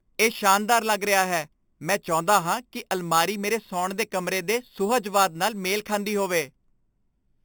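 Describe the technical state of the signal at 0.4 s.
At 0.4 s the speech carries imaging from sample-and-hold upsampling, present throughout the clip. Each 8 kHz sample was simply repeated up to 44.1 kHz without smoothing, so a mirrored spectrum about 12 dB down fills 4 to 8 kHz as metallic fizz. A spectrogram shows upside-down harmonics there; the waveform shows staircase steps.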